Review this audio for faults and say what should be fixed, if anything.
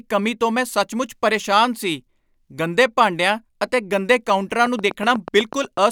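A train of clicks runs from 4.66 to 5.78 s: around ten near-identical pulses at a regular 8.1 per second, peaking roughly 5 dB above the speech and ticking through pauses as well. The even spacing and matching shape set it apart from random vinyl-style crackle or isolated edit clicks. The likely cause is a faulty connection or power supply, or electrical interference from nearby equipment. To prevent it, secure and screen cables, keep other equipment away, and check the power supply.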